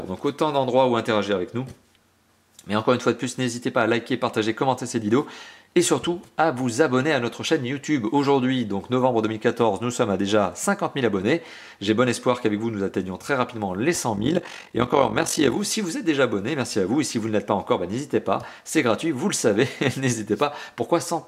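For about a second and a half, from 14.17 to 15.58 s, the audio picks up a fast, buzzy flutter, a sort of robotic tremolo riding on top of the sound. That's overlap-add ripple: the signal got chopped into windowed frames and stitched back together with an overlap whose windows don't add up to a flat gain, so the level dips and swells once per frame, by about 11 dB, at around 50 Hz.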